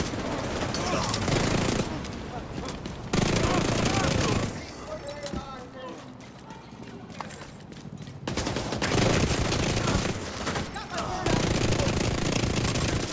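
Nothing is technically wrong with the clip.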